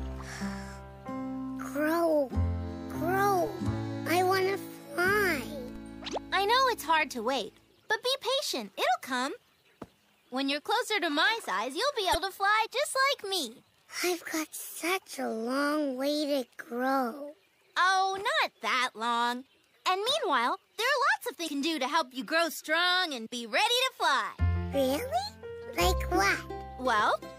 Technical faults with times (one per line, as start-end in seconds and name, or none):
3.47 DC step
5.76 DC step
12.11-12.15 damaged data in a compressed stream
21.44-21.48 damaged data in a compressed stream